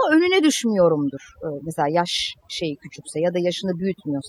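From the first moment to the last, you're hearing overdone noise removal: the denoiser was pushed too hard, so bands close to its noise estimate get slammed down or shut off, taking quieter bits of the voice too. The gaps fall to near silence with twinkly specks.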